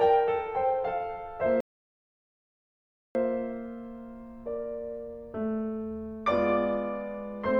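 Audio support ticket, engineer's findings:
Rebuffering stall, 1.60–3.15 s. Music cuts to silence, then resumes at the exact point it stopped; no content missing, about 1.55 s added. Player-side buffer underrun: download fell behind playback, output halted until data arrived.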